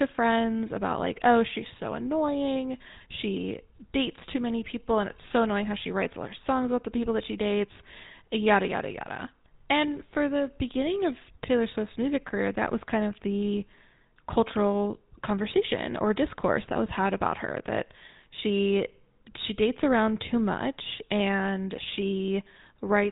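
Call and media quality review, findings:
GSM full-rate codec across the whole speech clip. Buzzy, gravelly roughness, plainly audible, and nothing above 3.8 kHz, so it sounds dull and band-limited. The vocal-tract model is fed by sparse regular pulses, which gives that rasp. The sound fits the 13 kbps full-rate setting.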